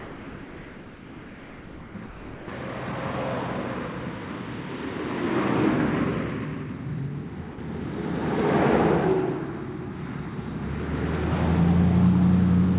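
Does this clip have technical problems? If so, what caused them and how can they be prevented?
Yes. Sound dropped by the voice detector occurs from 0 to 1.94 s, 2.06 to 2.48 s and 7.52 to 7.58 s, where the sound gives way to steady comfort noise. The likely cause is the sender's detector treating these sounds as background and pausing transmission. Turning off voice activity detection at the sender prevents this.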